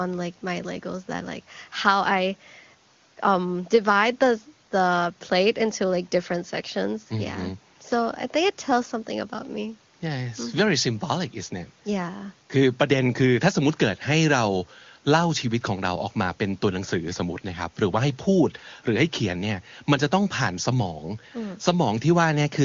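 Nothing stood out on listening to this speech clip.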